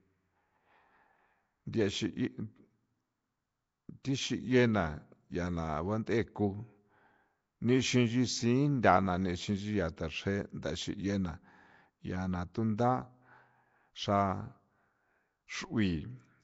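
From start to finish the speech carries a rough, hissy halo and a smeared, underwater blur, with nothing above 7.7 kHz. This is likely Nellymoser compression, the old Flash microphone codec, at a rate that fits about 32 kbps. Weak bands got no bits and were filled with noise, so the hiss follows the speech rather than sitting as a steady floor. That noise fill sets it apart from MP3-style swirling or a simple low-pass.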